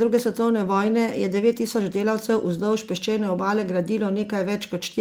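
Nothing stood out on listening to this speech recording.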